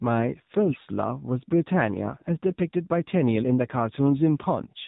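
A speech clip carried over the AMR narrowband mobile codec. Nothing above 4 kHz survives, so the sound is muffled and telephone-like. The damage is plainly audible: the voice is buzzy and synthetic, which fits a low AMR mode of about 7.4 kbps. From 0.66 to 0.79 s, AMR bit errors break in. The voice turns hoarse, scratchy and gargly for about 0.13 s, roughly six 20 ms frames. A few percent of the weakly protected bits arrived flipped. The pulses driving the voice model landed wrongly, while pitch and level roughly held.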